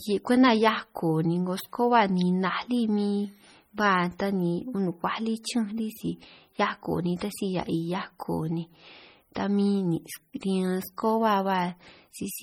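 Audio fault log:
throughout, MP3 compression: watery, swirly speech with smeared attacks, likely a heavily starved MP3 around 32 kbps; the spectrogram shows flickering holes and nothing above 20.9 kHz.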